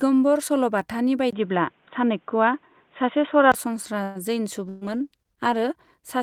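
At 1.31 s the sound turns dull and boxy after a 20 ms silence, likely an input switched to a poorer device. Nothing above 3.8 kHz passes, the level steps by around 5 dB, and a new noise floor sits roughly 45 dB down. Unlike a bitrate drop, the tone stays steady rather than rough, until it clears at 3.54 s.

From 4.03 to 4.18 s a call audio freeze holds the last sound as a fading buzz or hiss for 118 ms. When the audio resumes it picks up exactly where it stopped, with nothing missing, which sets it apart from packet loss. The cause is likely packets delayed in transit.

At 4.69 s a call bitrate drop from 40 to 16 kbps begins. For about 1 second the sound becomes rough and watery, with the high frequencies cut away. It recovers by 5.77 s. The change comes from coarser coding, not a different microphone.

Also starting at 4.69 s, a burst of packet loss lasts until 4.84 s. The receiver stretches the last sound into a fading buzz or hiss for 120 ms, then jumps ahead, leaving 120 ms permanently missing. 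That skipped audio is what separates it from the freeze heard earlier.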